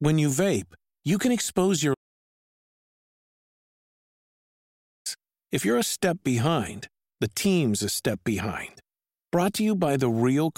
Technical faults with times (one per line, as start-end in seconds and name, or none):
1.94-5.06 audio dropout to silence